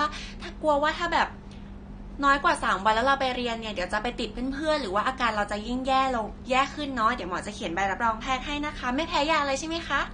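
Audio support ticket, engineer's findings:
Speech dull and smeared throughout, nothing above 9.7 kHz, warbling, fizzy texture on sibilants and sustained sounds. Likely AAC compression, AAC-LC-style, fitting a low bitrate near 32 kbps: coarse quantisation leaves spectral holes. Plain low-pass filtering would dull without the warble.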